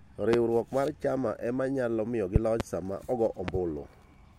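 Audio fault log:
0.33–0.36 s, 2.36–2.63 s, 3.48–3.58 s, loud pop: one, then two double pops, roughly 15–20 dB over the speech, likely static or switching spikes; tall waveform spikes, full-height spectrogram lines.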